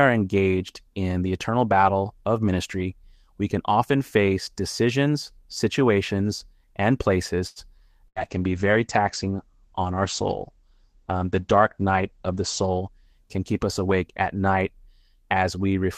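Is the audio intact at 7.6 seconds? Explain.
No. A short stall from a late packet runs from 7.47 to 7.59 s: the jitter buffer emptied, so about 86 ms of sound was stretched and held, with a slight buzz or dip, before resuming with nothing lost.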